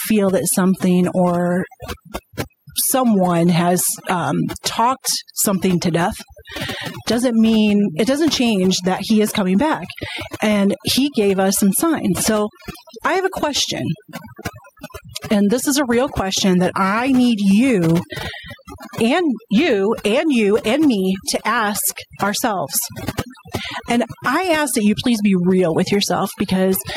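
Three faults run through the whole of the speech, from the first second to the last.

Computer activity noise sits under everything as a buzzy, chirping texture pulsing at roughly 70 times a second, around 30 dB below the speech. It rises and falls independently of the talking, which points to load changes in the processor, graphics hardware or mouse disturbing the ground shared with the audio circuit and leaking straight into the signal path.

Overdone noise removal is also present throughout. The noise reducer was set too aggressively, so it pulls individual frequency bands down hard whenever they come close to its noise estimate. Between phrases the background drops and breaks up into twinkling, metallic specks. The quieter components of the speech are stripped away along with the noise.

Gain pumping adds a breathing quality. The gain swings by something like 10 dB, and loud and soft passages sit squashed close together in level. 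The likely cause is input gain set far too high for the microphone, with a fast limiter or compressor clamping down on every peak and releasing in the gaps.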